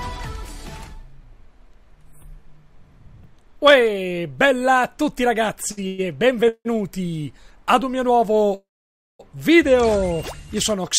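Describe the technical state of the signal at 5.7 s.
At 5.7 s the sound briefly hangs, held for about 58 ms between 5.71 and 5.79 s with a faint buzz or dip, then carries on with nothing skipped. It is a short stall from a late packet: the jitter buffer ran dry, the receiver stretched the last sound until the packet arrived, and playback resumed from the same point, now 58 ms later.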